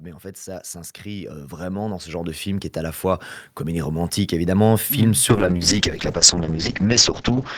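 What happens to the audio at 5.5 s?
A call bitrate drop is under way there. From 5.31 s to the end of the clip the encoder falls from 64 kbps to 7 kbps, coding more coarsely and narrowing the bandwidth from 20 kHz to 8 kHz, so the speech turns rough, watery or muffled and never recovers.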